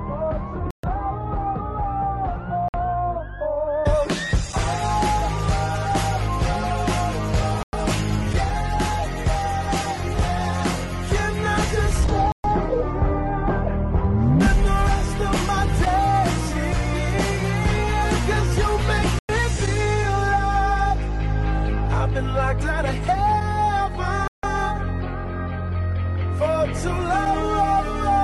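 The sound drops into short silences of about 55 to 157 ms at 0.71, 2.68, 7.63, 12.32, 19.19 and 24.28 s, each a clean gap before playback carries on. These are likely Bluetooth stalls, where held-up packets let the headphones' buffer run empty.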